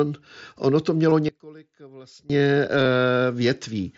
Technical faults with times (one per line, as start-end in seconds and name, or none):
1.10 concealed Bluetooth headset packet loss
1.29-2.30 one channel inverted
2.83-2.86 concealed Bluetooth headset packet loss